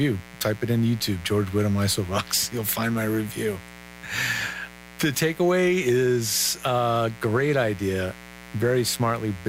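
A speech recording carries mains buzz from start to finish. The buzz is steady and raspy, not a soft hum. It sits roughly 20 dB below the speech. Its spacing fits a 60 Hz supply. Sharp switching spikes arrive twice per mains cycle, from a dimmer, a rectifier or an unshielded cable. Those spikes spread harmonics of 60 Hz up into the kilohertz range.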